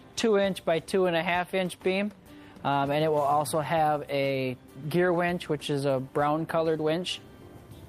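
No technical faults are audible anywhere in the clip.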